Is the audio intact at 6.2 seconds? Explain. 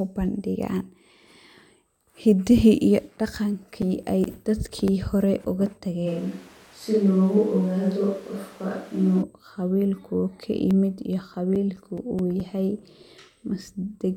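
No. From 6.08 to 9.21 s, between "hore oga" and "qawilkuu ka", there is a switch to a distant microphone, likely because the close one dropped out. The sound turns roomy and thin in the bass, with room noise roughly 30 dB below the speech but little change in level. Unlike added reverb, it starts and ends abruptly and brings its own background noise.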